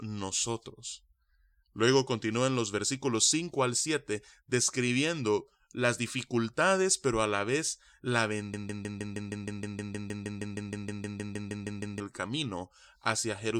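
From 8.54 s to 12.0 s the speech sticks on one fragment about 0.16 s long, repeating it 22 times back to back in a stuttering broken-record loop. The player or stream likely stalled and kept resending its last buffered piece, so that stretch's audio is lost.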